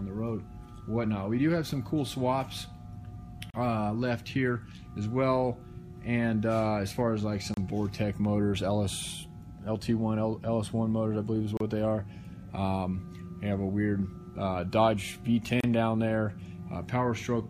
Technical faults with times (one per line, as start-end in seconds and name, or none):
3.50-3.54 gap at a join of encoded pieces
7.54-7.57 gap at a join of encoded pieces
11.57-11.60 gap at a join of encoded pieces
15.60-15.64 gap at a join of encoded pieces